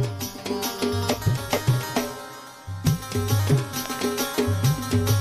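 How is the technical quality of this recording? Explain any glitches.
One glitch stands out, a loud pop. Between 3.86 and 4.01 s, two sharp pops jump out around 15 dB over the continuing sound, likely a voltage spike from a plug, switch or static.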